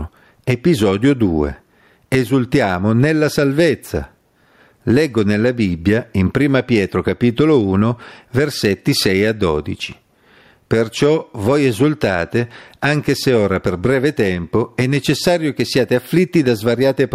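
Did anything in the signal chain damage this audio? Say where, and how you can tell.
Yes. Throughout the speech, the gain swings by roughly 15 dB, with loud and quiet passages squashed together. This is gain pumping, likely from input gain set far too high and a fast limiter clamping it back.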